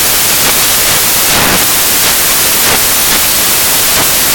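Loud, hissing white noise covers the speech from start to end: samples built from the wrong bytes, turning each sample's fast-changing low bits into its loudest part.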